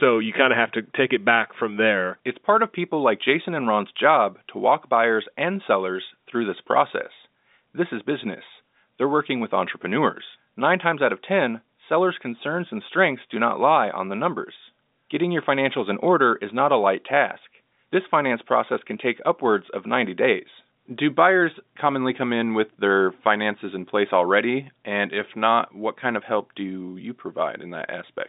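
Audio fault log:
No faults logged; the speech sits in the normal G.711 telephone band of about 200 Hz to 3.7 kHz, with nothing above 3.8 kHz, as expected for that line.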